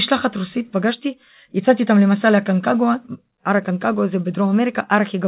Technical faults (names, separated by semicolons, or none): none